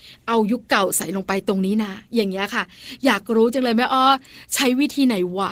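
From start to finish the speech carries Opus voice compression, and it's plainly audible. The top end isn't cut off, but the sound has that hoarse, slightly robotic grain of a coarsely coded excitation. That pattern points to Opus in hybrid mode, with linear prediction handling the lower band and a transform layer covering above 8 kHz, squeezed to something around 16 kbps, which leaves too few bits for either part.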